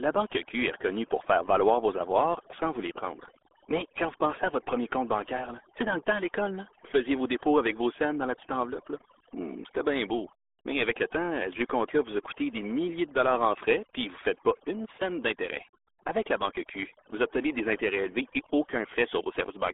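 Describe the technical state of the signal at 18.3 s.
At 18.3 s, as throughout the clip, overdone noise removal is acting: an aggressive noise reducer pulls bands near its noise estimate down to nothing, leaving near-silent gaps with twinkling specks. The RealAudio 14.4 codec also runs for the whole clip. Its heavy low-rate coding, which fits an 8 kbit/s dial-up codec, confines speech to roughly 300 Hz to 3.5 kHz with nothing above 3.8 kHz, so the speech sounds muffled and gargly.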